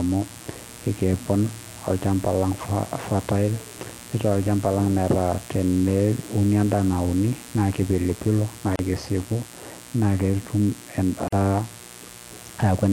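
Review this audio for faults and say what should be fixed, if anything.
A steady, raspy mains buzz runs under the speech from start to finish, sitting roughly 20 dB below it. The fundamental is 60 Hz, and a ladder of sharp harmonics reaches up into the kilohertz range. This happens when switching spikes from a dimmer, a rectifier or an unshielded cable get into the signal twice every mains cycle. To prevent it, keep dimmers and switching supplies off the audio circuit and use shielded, properly grounded cabling.

Two short holes of silence break the otherwise continuous speech. The first runs from 8.76 to 8.79 s and lasts about 34 ms. The second runs from 11.28 to 11.33 s and lasts about 44 ms. Each has smeared edges, and the sound resumes exactly where it left off. This is a gap at a join of encoded pieces: separately encoded segments were spliced without removing each encoder's start-up delay and end padding. 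To prevent it, encode the material in one pass or trim the encoder delay and padding before joining.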